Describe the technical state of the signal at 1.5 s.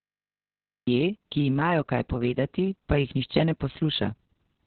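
At 1.5 s the speech sits under Opus voice compression that runs the whole clip: the SILK coder, squeezed to what sounds like about 6 kbps, cuts the band to narrowband and quantises the excitation coarsely, so nothing survives above 4.3 kHz and the voice sounds muffled, hoarse and faintly robotic.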